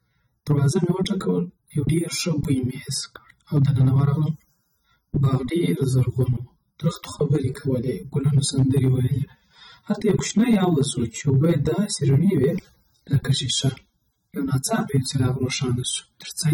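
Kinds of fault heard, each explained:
AAC compression: The speech sounds dull and smeared, with a warbling, fizzy texture on sustained sounds and sibilants, and nothing above 17.9 kHz. The likely cause is AAC-LC coding at a low bitrate, consistent with 24 kbps, that discards fine spectral detail.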